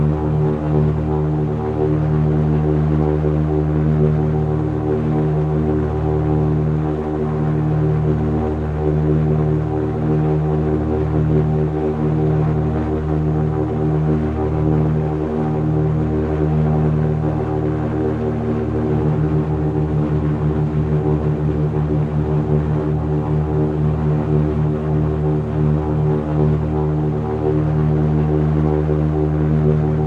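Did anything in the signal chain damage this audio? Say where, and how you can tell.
No, nothing along the chain from capture through to playback has left any damage you can hear in this audio.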